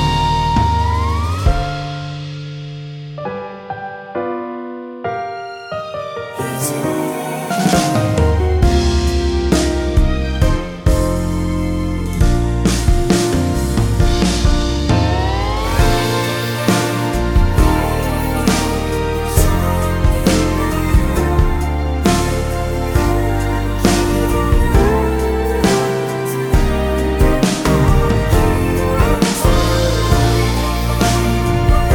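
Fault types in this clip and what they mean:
Nothing here stands out as a technical fault, so there's nothing to list for this one.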